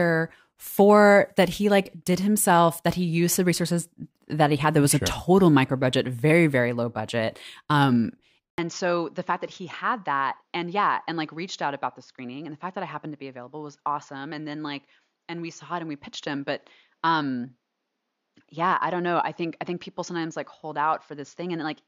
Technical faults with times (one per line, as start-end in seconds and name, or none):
8.50-21.87 input switched to a poorer device